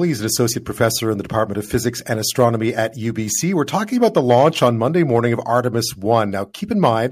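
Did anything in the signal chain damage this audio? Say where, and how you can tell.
No, nothing audible in this speech clip points to damage at any stage of the signal chain.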